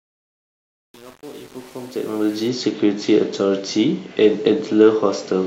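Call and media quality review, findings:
Truncation distortion on the fade, 0.0–2.48 s, worst across the whole span. Gritty, stepped low-level speech. Probable component: gain/fade stage without dither, consistent with about 7-bit effective resolution.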